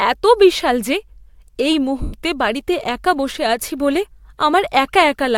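Lost LE Audio frames, 2.02 to 2.13 s: 110 ms of speech drops out, which fits eleven 10 ms frames going missing. The LC3 decoder fills the gap by reusing the last spectrum with randomised signs, so the sound smears into a noisy hiss that fades away.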